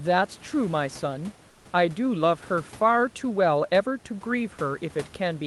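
Transmission likely paused from 1.49 to 1.65 s, and comfort noise in place of the background replaces the room noise with flat, featureless hiss about 2 dB quieter.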